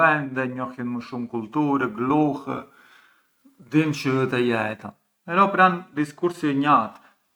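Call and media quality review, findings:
No audible faults found.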